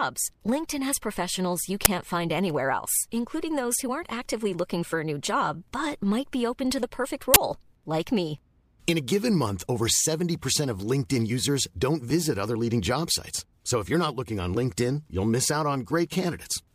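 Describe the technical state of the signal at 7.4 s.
An uninitialised buffer hits the speech from 7.34 to 7.36 s. Leftover memory plays as samples for one 20 ms block. It sounds like a loud crack.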